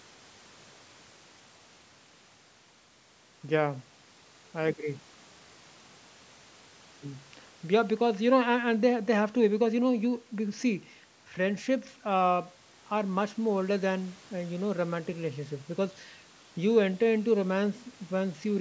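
No technical faults are audible.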